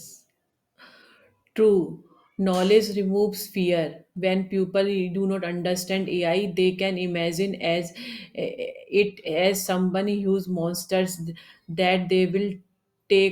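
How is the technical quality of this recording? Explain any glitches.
No glitches can be heard.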